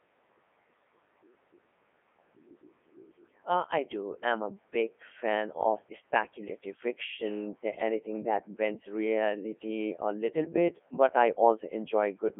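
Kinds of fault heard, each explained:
Codec 2 vocoder: the speech sounds robotic, buzzy and heavily degraded, confined to about 250 Hz to 3.5 kHz with nothing above 3.8 kHz, because this digital-radio vocoder, apparently at 3.2 kbit/s, transmits only pitch, voicing, energy and envelope, then resynthesises the voice from sine waves.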